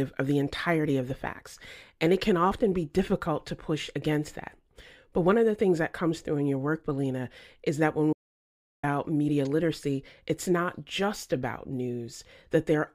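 In this speech, the sound cuts out abruptly after "is that when" at 8.13 s and returns at 8.83 s on "media literacy it's not", leaving about 0.70 s of dead silence with no room tone. This audio dropout to silence likely comes from lost input while recording continued, writing silence.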